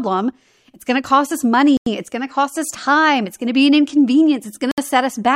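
Speech with two brief dropouts to silence, about 94 ms right after "going to cost us" at 1.77 s and 64 ms at 4.71 s, likely a Bluetooth stall.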